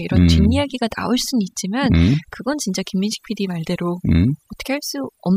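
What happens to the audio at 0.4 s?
At 0.4 s, as everywhere in this speech, overdone noise removal drops bands near the noise estimate, leaving twinkling specks and a spectrogram of scattered isolated blobs in near-black background.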